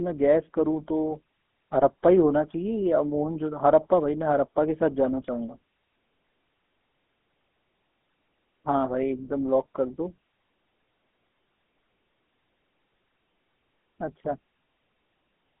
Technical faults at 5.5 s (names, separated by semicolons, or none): GSM full-rate codec